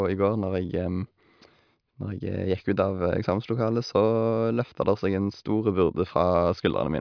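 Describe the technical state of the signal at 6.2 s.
At 6.2 s the speech signal is intact, with no dropout, distortion or other technical fault audible at that point.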